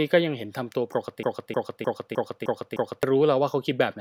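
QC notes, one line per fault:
1.23–3.03 s, broken-record loop: a 0.31 s fragment of speech repeats six times back to back, likely from a stalled player or stream re-sending its last buffer.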